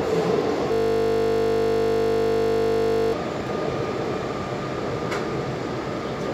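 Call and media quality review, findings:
System hang loop, 0.72–3.13 s: audio replaced by a steady 50 Hz buzz. Probable component is the host or audio driver stalling while the interface kept replaying one 20 ms ring-buffer segment, repeated about 120 times until recovery.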